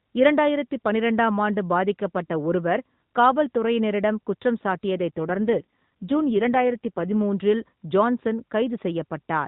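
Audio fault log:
5.17–7.23 s, AMR rate drop: right after "காவல் துறையினரிடம் குற்றம் சாட்டியதைத்" the voice turns rougher and more buzzy-synthetic for about two seconds, which fits the link pushing the AMR-NB codec from 12.2 down to 5.9 kbps. With fewer bits for each frame, the vocal-tract model gets cruder. The narrowband sound stays the same and there's no gap.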